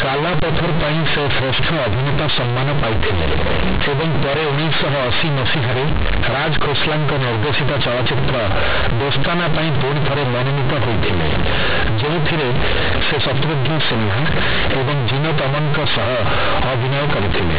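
Speech, heavily distorted from start to end by companded audio read as linear. The mu-law bytes are played as plain 8-bit samples without expansion. Quiet passages become as large as loud ones, giving loud, buzzy distortion and harsh noise in pauses. The narrow band, nothing above 4 kHz, fits ordinary G.711 telephone coding.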